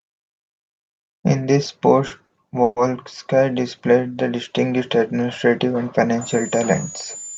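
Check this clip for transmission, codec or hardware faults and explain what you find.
Three kinds of fault affect this speech clip, all in the middle or final seconds.

Short stalls from late packets at 2.07–2.12 s and 2.26–2.31 s: each time the jitter buffer ran dry, the receiver held the last sound for about 30 ms. This causes a brief smear or buzz, but nothing is lost.

A call audio freeze from 2.63 to 2.78 s, likely caused by packets held up in transit: the receiver stretched the last sound for about 130 ms, fading into roughly 20 ms of silence before the audio resumes intact.

A switching supply whistle from 6.21 s to the end: a thin, high whistle drifting between 6.8 and 7.2 kHz, around 15 dB below the speech. This points to a power supply running in audible burst mode or beating with another supply. It sits just inside the call's roughly 8 kHz upper band edge.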